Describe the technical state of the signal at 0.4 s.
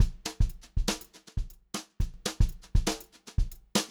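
At 0.4 s the signal is intact, with no dropout, distortion, glitch or other technical fault audible at that moment.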